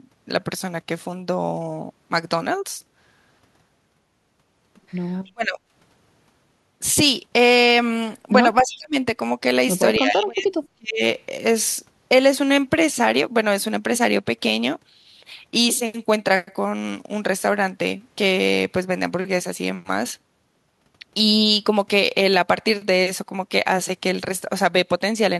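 At 5.25 s a very faint echo leak appears. A copy of the speech returns 288 ms late, far below the speech. The far end's echo canceller likely missed part of its loudspeaker pickup. From 5.3 to 5.6 s the speech is suppressed in double talk. It drops by roughly 35 dB. The canceller likely mistook both talkers for echo. At 8.57 to 8.76 s the echo leak returns. The delay is again 288 ms, now louder, about 20 dB under the speech. A canceller likely left residue. From 8.62 to 8.95 s the speech sinks about 30 dB in another double-talk suppression, likely the same confusion. From 9.99 to 11.01 s a longer dropout follows. For about a second the speech falls as much as 40 dB, likely double-talk suppression again.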